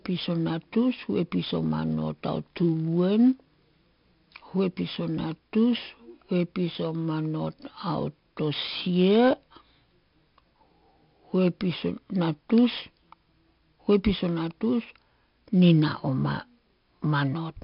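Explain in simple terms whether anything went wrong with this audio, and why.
Something did go wrong: the speech carries 4-bit ADPCM compression damage from start to finish. This older squeeze-down method stores each sample as a small guessed step, so the loud parts come with a gritty hiss that rises and falls with the voice, and sudden sounds get roughened. Nothing is heard above about 5.3 kHz, giving a dull tone. Unlike modern codecs, there's no watery swirl, only this level-following grit.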